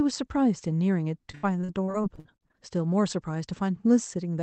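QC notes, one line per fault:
1.31–2.56 s, repeated packet loss (robotic sound): roughly a dozen dropouts, up to 80 ms each, patched by stretching prior sound, giving choppy speech with pieces missing.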